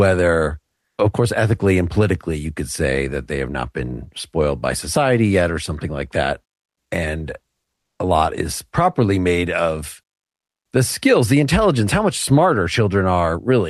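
From 0.87 to 0.97 s, a 100 ms pause has comfort noise in place of the background. The real background, already about 56 dB below the loudest speech, gives way to a steady, featureless hiss about 3 dB quieter. The likely cause is Opus discontinuous transmission: the sender stops coding during silence, and the receiver synthesises shaped noise. Elsewhere, the call path's Opus coding limits the band to about 12 kHz.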